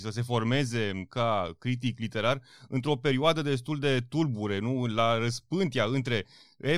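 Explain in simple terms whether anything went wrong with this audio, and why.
Nothing went wrong here; no technical fault can be heard anywhere in this speech recording.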